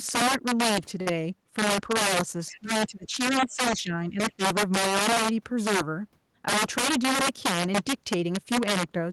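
Right through the speech there's integer overflow: the loudest peaks are pushed about 9 dB past full scale, and instead of being limited they wrap to the opposite sign. A small share of samples does this, so you get harsh, violent cracks on loud syllables, far nastier than ordinary clipping.

At 1.01 s there's a short stall from a late packet. The jitter buffer ran dry, so the receiver held the last bit of sound for about 49 ms until the packet showed up, then carried on. Nothing's lost, but that moment drags with a faint buzz or dip.

From 2.48 to 2.60 s a faint second voice creeps in, roughly 25 dB under the speech. That's most likely the other side's voice leaking through, where the far end played on a loudspeaker and the echo canceller didn't fully remove it. Another scrap turns up at 4.30 to 4.34 s, about 30 dB down.

Overlapping that first scrap, from 2.51 to 3.17 s the speech sinks badly, up to about 25 dB down. 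That's likely speech suppressed in double talk, with the canceller confused by both voices and turning everything down. It repeats more mildly at 3.40 to 3.92 s and 4.10 to 4.20 s, about 10 dB each, and briefly at 4.37 s, about 15 dB.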